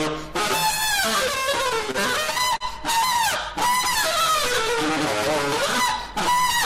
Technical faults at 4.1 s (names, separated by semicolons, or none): none